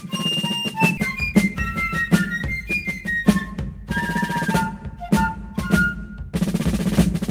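Music, with two timing faults. At 0.97 to 0.99 s, a skip ahead dropped about a second of audio, so the music jumps forward with the two sides joined directly and no gap. From 1.84 to 2.74 s, a jitter buffer speed-up trimmed short pitch-period pieces, roughly 50 ms in total, so the music runs about 5% fast at unchanged pitch and its tempo briefly hurries.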